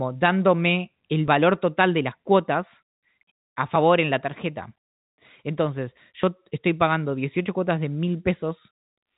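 At 1.28 s and again at 6.23 s the speech skips forward: a short slice of roughly 20 ms is gone and the audio on either side is butted together with no silence between. This is audio missing between chunks, likely caused by a recorder or processor handling the signal in 2.5 s blocks and dropping about 20 ms each time it closes one block and opens the next. The joins come through the telephone-band G.711 path, which cuts everything above 3.8 kHz.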